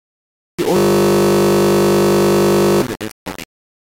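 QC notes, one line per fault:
Throughout: low bit depth without dither, speech rounded to roughly 4 bits, likely; error tracks the signal, gritty grain near the level, waveform visibly stair-stepped.
0.77 to 2.82 s: system hang loop, one 20 ms slice repeats about 100 times, a steady 50 Hz buzz; spectrogram shows evenly spaced vertical striping.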